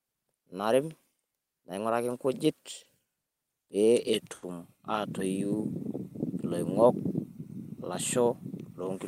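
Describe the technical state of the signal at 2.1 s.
At 2.1 s the speech signal is intact, with no audible dropout, distortion or other technical fault.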